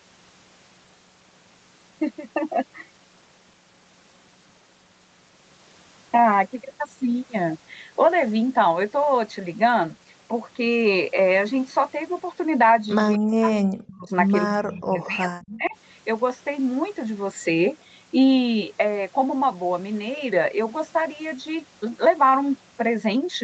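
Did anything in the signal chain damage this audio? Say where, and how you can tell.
Yes. An echo leak appears at 13.13 to 13.18 s, in the call-processing stage. A brief, faint copy of the speech arrives about 232 ms behind the original, well below the level of the direct speech. The likely cause is a far-end echo canceller that did not fully subtract what its microphone picked up from the loudspeaker, so a delayed remnant of this side's audio was sent back into the call.

Speech suppressed in double talk follows immediately, from 13.18 to 14.11 s and again from 14.46 to 15.75 s, also in call processing. The speech sinks sharply, in places almost to silence, across most of the first stretch and about a second of the second. This likely happened because both ends were active at once, and the echo canceller, unable to separate its own talker from the loudspeaker echo, attenuated everything.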